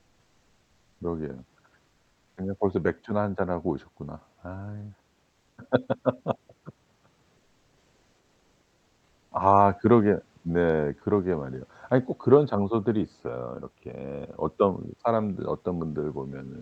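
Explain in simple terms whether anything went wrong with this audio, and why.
Between 5.29 and 5.57 seconds, for a little over a quarter of a second, the real background in a pause is replaced by a smooth, even hiss with none of its natural detail, at almost the same loudness. This is comfort noise in place of the background. The likely cause is the calling software pausing transmission when nobody was talking, while the receiving end filled the gap with made-up noise shaped to resemble the room.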